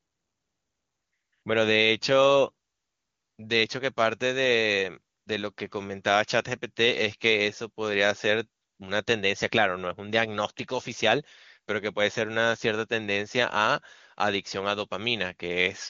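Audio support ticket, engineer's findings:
No faults found in the speech; AMR wideband (HD Voice) codec path working as expected.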